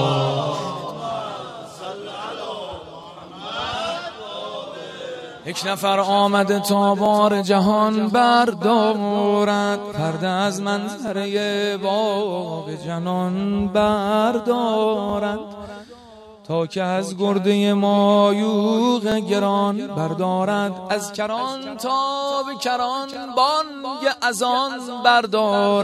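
At 3.04, 7.06, 11.08, 15.10, 19.12 and 23.14 s the audio has overlapping chunks. The stream was cut into 4.0 s blocks, and each block begins 20 ms before the previous one ended, so that 20 ms slice plays twice at every join. Each repeat is a brief stutter or click at the seam. Because the duplicated time accumulates, the events come about every 4.02 s with a steady mechanical regularity.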